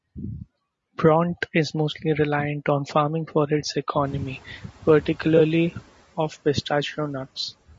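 The whole clip has the rough, grainy texture of low-delay AAC compression. The likely cause is AAC-ELD, the low-delay codec used in video calls, at a rate that fits about 32 kbps. At this low rate, noise fills the gaps between the pitch harmonics of the speech. The damage is plainly audible. The top band sounds thin and synthetic. The call microphone processing also leaves nothing above 8 kHz.

Around 4 s, the room noise jumps by about 21 dB. The noise suppressor catching up is heard from 4.04 to 5.79 s, just after "on farming for its". The suppressor's noise estimate lags behind the sudden rise. The louder background first comes through with little reduction. It then sinks by about 7 dB as the estimate adapts over roughly 1.75 s. The result is background noise that jumps up and then slowly settles.

From 5.37 to 5.41 s there is a brief AAC frame loss with concealment. The gap points to one lost frame of about 20 ms. 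The decoder fills it from the last good spectrum. It does not have the real signal. The patch is too short to fade into silence. Instead it gives a quick smeared, noisy blip. This lands inside the suppressor's recovery.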